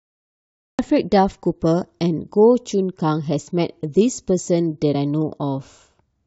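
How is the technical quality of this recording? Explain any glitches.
Two glitches affect the quality of the recording, one at the very beginning and one near the end.

Cut-off start: the recording began late. After digital silence lasting until 0.79 s, speech enters abruptly mid-sound, appearing as a flat line before a sudden vertical waveform edge.

Compressed frames skipped: at about 4.91 to 4.96 s, skipped compressed frames make the speech jump ahead roughly 20 ms.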